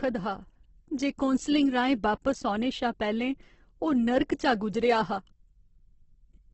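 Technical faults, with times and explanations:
Throughout, Opus compression: the speech has gone rough and grainy rather than swirly, with a hard ceiling at about 8.1 kHz and nothing above it. That pattern likely comes from Opus in its music mode starved of bits, which fits something near 12 kbps. The encoder keeps each band's energy but fills many with folded or noise-like content, so tonal parts of the voice turn gritty instead of leaving holes.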